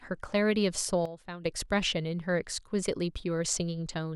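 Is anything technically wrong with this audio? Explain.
Yes. From 1.06 to 1.46 s the speech suffers a sudden gain jump, dropping about 12 dB and then returning. The likely cause is a digital gain setting applied instantly, without a ramp. Unlike a compressor or fade, the level steps rather than glides, and the background noise drops along with the speech.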